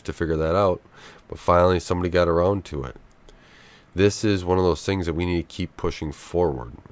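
Nothing stood out as a technical fault on listening to this speech recording.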